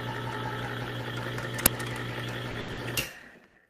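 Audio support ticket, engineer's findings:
Uninitialised buffer at 1.66 s. Very short, loud crack, roughly 5 ms. Probable component: output buffer handoff. A block went to playback before any audio was written into it, so stale memory played as samples. Length fits a 256-sample block.

Short stall from a late packet, four hits, all in the receive-side jitter buffer. The buffer ran dry, the last sound got stretched until the packet showed up, then playback resumed where it left off. Nothing lost, just held too long.
2.51–2.56 s: about 30 ms stretch.
2.60–2.70 s: about 80 ms.
2.72–2.79 s: about 50 ms.
3.47–3.56 s: about 70 ms.
Each one adds to the playout delay.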